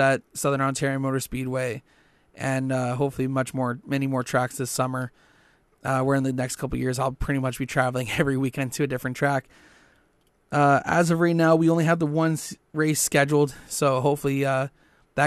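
No technical faults can be heard anywhere in this speech recording.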